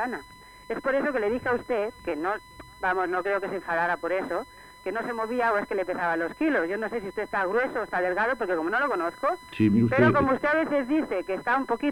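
There's a steady 1 kHz whine sitting under the sound for the whole clip, which is classic USB whine. The pitch never moves, and it's roughly 25 dB below the audio. It comes from the USB bus pulling current in 1 ms frames; that periodic load gets onto the power or ground of the audio path and turns into a fixed tone at the 1 kHz frame rate.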